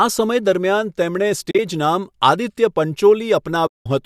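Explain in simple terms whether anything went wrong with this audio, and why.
Pieces of the coded stream went missing and the decoder filled them with silence, which is AAC frame loss with muting. Around 1.51 to 1.59 s, short bits of speech vanish in scattered gaps. At 3.67 to 3.86 s a longer stretch fades out and back in, leaving a soft hole.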